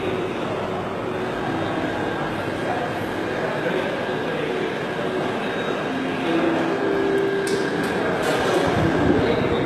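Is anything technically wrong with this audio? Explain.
Yes. Throughout the recording there is plainly audible damage that sounds like HE-AAC compression, likely at a low bitrate of around 16 kbps. Only the lower spectrum is coded directly; the treble is rebuilt by copying lower bands upward under a coarse envelope, so it stays bright but doesn't match the original harmonics, and hissy, sibilant sounds turn gritty and metallic. Unlike a plain low-pass filter, the top isn't dull, yet nothing reaches above 12.3 kHz.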